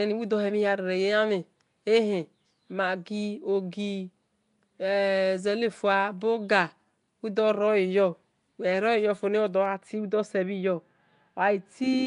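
From the first moment the speech carries a rough, hissy halo and a smeared, underwater blur, with nothing above 10.6 kHz. The likely cause is Nellymoser compression, at a rate that fits about 44 kbps. Its fixed-rate coder starves weak bands of bits and fills them with noise. Unlike the swirly, metallic artefacts of an MP3-style codec, the damage here is a grainy noise wash that runs from start to finish.

At 9.66 s the sound turns duller and more muffled and stays that way to the end. De-emphasis was applied wrongly: a treble cut meant to reverse pre-emphasis was applied to audio that never had it, or was applied twice. The top end falls smoothly, reaching about 14 dB down at 10 kHz relative to 1 kHz. What separates this from a low-pass filter is the gentle, gradual slope rather than an abrupt cut at one frequency.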